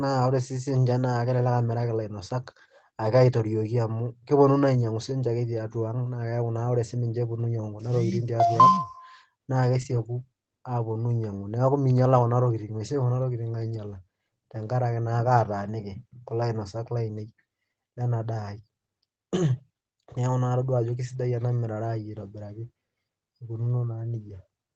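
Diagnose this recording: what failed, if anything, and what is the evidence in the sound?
Network: from 9.77 to 9.99 s the speech turns rough and noisy but never gaps, so lost packets were rebuilt from error-correction copies, not concealed.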